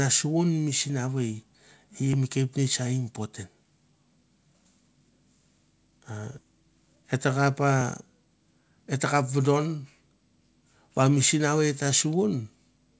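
A speech recording, band-limited to nothing above 8 kHz as a wideband call codec such as G.722 at 64 kbps would leave it, jumps forward abruptly at 6.38 to 6.45 s. Roughly 0.7 s of audio vanishes with almost no gap. This skip ahead means buffered audio was discarded, and the playback delay shrank by about that amount.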